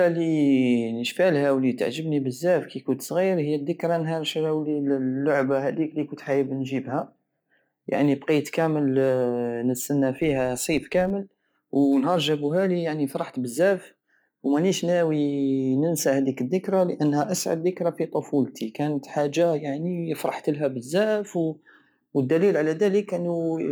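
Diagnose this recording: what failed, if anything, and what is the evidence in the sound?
A filter restarted on every block, in the processing stage. From 10.18 to 11.12 s the speech carries a buzz at about 86 Hz that tracks its level. Each block begins with a small transient from zeroed filter state. The rate fits a 512-sample block.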